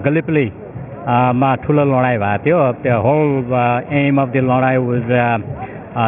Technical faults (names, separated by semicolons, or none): aliasing